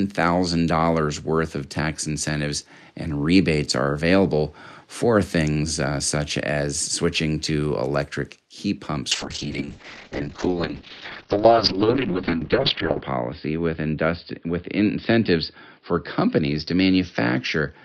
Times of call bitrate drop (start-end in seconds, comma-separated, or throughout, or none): 9.12-17.85